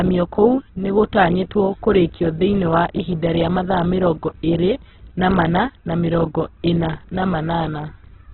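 Throughout, the speech stops above 4.2 kHz and turns grainy rather than swirly like MP3: likely Opus compression filling starved bands with noise, which fits about 8 kbps.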